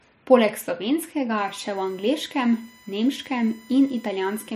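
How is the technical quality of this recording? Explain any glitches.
USB whine from 1.38 s to the end of the speech at 4.55 s. A USB device's bus pulls current in regular 1 ms frames, and that repeating draw leaks into the audio through shared power or ground, producing a steady tone locked to 1 kHz with its strongest component at the 2 kHz harmonic. It sits roughly 30 dB beneath the speech, a thin, fixed-pitch whine that stays put while the speech moves around it.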